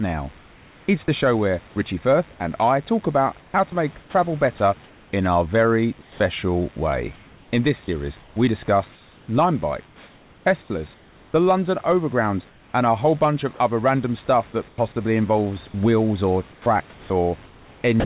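A 50 Hz mains buzz runs through the whole clip, at roughly 30 dB below the speech. Switching spikes entering the signal path, twice per mains cycle, stack up harmonics into a steady, raspy drone under everything, cut off at the call's 4 kHz upper limit.

From 0.38 to 6.2 s, 8.2 to 12.74 s and 14.68 to 18.04 s, the speech is chopped, likely by the sender's voice detector repeatedly switching transmission off. About 1.42 s, 1.86 s and 0.54 s of quiet speech are replaced by comfort noise, so syllables drop out.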